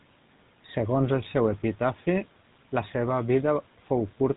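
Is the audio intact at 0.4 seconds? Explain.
No. At 0.4 seconds the speech carries GSM full-rate codec damage, which runs through the whole clip. This codec models the vocal tract and excites it with sparse, regular pulses. Nothing passes above 3.8 kHz. The result is a plainly audible buzzy, gravelly roughness, fitting a 13 kbps GSM stream.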